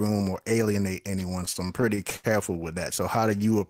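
Right after "or alienate anyone", from 1.45 to 2.65 s, the speech catches and drags in a run of nine short stutters, the longest holding for about 72 ms. This is repeated stalls (stutter): packets arrived late or too slowly, so the jitter buffer kept running dry. Each time, the receiver stretched out the last sound until audio resumed, about 207 ms of fill in all, roughly a sixth of that stretch. Nothing is lost, but the rhythm stumbles.

From 3.21 to 3.68 s the speech slows to about 91% of normal speed with its pitch unchanged, so sounds come out drawn-out and slightly elongated. This is a jitter buffer slow-down: with its reserve low, the receiver repeated single pitch periods and slivers of pause to rebuild a cushion, adding 51 ms to that stretch without skipping any content.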